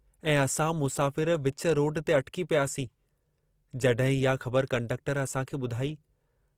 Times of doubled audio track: none

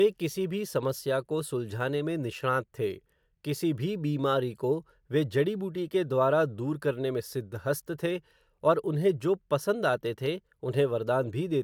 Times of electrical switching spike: none

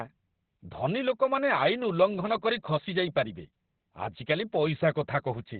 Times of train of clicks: none

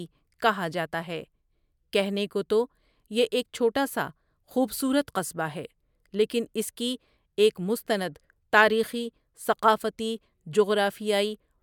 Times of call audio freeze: none

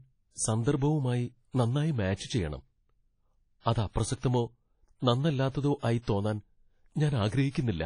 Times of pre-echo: 0.76-0.82, 2.16-2.19

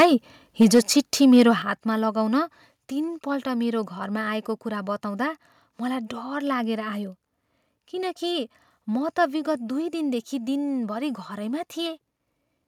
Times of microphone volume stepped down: 0.63, 1.62

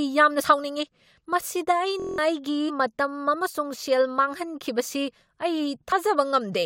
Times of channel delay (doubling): none

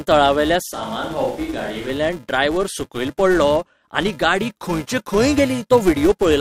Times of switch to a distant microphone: 0.73-1.89

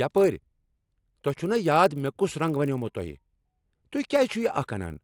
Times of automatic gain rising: none

